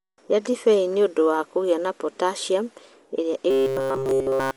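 A speech recording that was most likely squeezed through Dolby Digital compression at a low bitrate, something around 64 kbps. The encoder has narrowed the band, and it has starved many frequency lines of bits so the decoder refills them with noise. The codec damage is plainly audible throughout as a dull, muffled tone with rough, fluttering grain clinging to the voiced sounds. From 3.51 s to the end at 4.57 s, just after "kũgĩa na potassium ĩrĩa", the playback side seems to have run dry of fresh audio. The likely cause is software repeating short buffers in place of the missing audio. Essentially all of that stretch is recycled fragments, and the repeats impose a steady 134 Hz buzz, which fits a buffer of roughly 7.5 ms. The result is robotic sound from repeated short buffers, a rigid, metallic drone that only loosely follows the speech.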